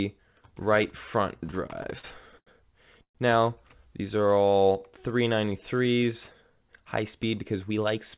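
Repeated stalls (stutter) run from 1.46 to 2.49 s. The jitter buffer kept running dry as packets arrived late or too slowly, and the receiver stretched the last sound through nine short gaps, the longest 89 ms. About 205 ms of filler takes up roughly 20% of that span, so little is lost but the audio drags and hiccups. The sound is band-limited with nothing above 4 kHz, which fits the G.711 mu-law call path at 64 kbps.

A call audio freeze follows from 3.03 to 3.17 s. The last sound is held and fades into about 100 ms of silence, 121 ms in all. This was likely caused by packets stalling in transit and emptying the buffer. Playback then resumes where it stopped, so the pause is inserted into the audio rather than cutting anything out, and everything after it plays 121 ms later.

A jitter buffer slow-down runs from 4.17 to 5.09 s. To rebuild its reserve, the receiver repeated single pitch periods and bits of pauses over and over, adding 140 ms. 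The audio plays at 86% speed with unchanged pitch, so sounds are drawn out and slightly sluggish.

A jitter buffer speed-up runs from 7.02 s to the end. With surplus audio queued, the receiver cut out short pitch-period pieces, roughly a tenth of a second in total, so the sound runs at 109% speed at the same pitch and feels hurried.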